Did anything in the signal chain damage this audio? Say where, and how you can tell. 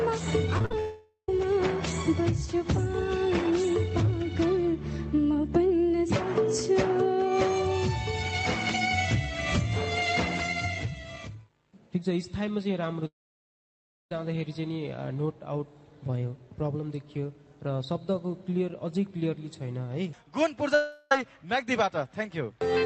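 Yes, at the network stage. Repeated packet loss (robotic sound) runs from 0.57 to 0.74 s: five short holes, the longest 46 ms, with about half the stretch patched by repeating the previous sound. That produces a choppy texture with fragments missing.

A long network dropout is the likely cause of three longer breaks, at 0.80 to 1.29 s, 13.07 to 14.12 s and 20.75 to 21.12 s. In each, the last sound is stretched into a fading buzz and then the audio resumes with that section gone. The 13.07 s break falls to near silence for most of its second.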